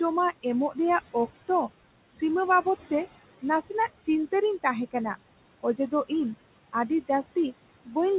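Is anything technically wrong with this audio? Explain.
Yes, there are two related faults in this speech recording, both caused by noise suppression.

Noise suppressor artifacts run through the whole clip. The suppressor pulls down each frequency band it judges to be steady background noise, by about 20 dB, and updates that decision frame by frame. The room noise, which sits about 15 dB below the speech, therefore drops away in the pauses and swells back up under the talking.

Speech cut by the noise suppressor occurs twice, from 5.61 to 6.11 s and from 7.85 to 7.97 s. In these spans the suppressor mistook low-level parts of the speech for noise and attenuated them along with the background. The deepest drop is about 21 dB in the first span and about 16 dB in the second. Only around a tenth of a second of sound is actually affected in each, so brief soft portions sound swallowed or faint rather than the whole stretch dipping.

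The audio is also band-limited, with nothing above 4 kHz. That fits a G.711 telephone-band call path.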